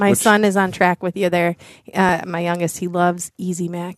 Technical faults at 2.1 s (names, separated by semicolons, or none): overlap between stream segments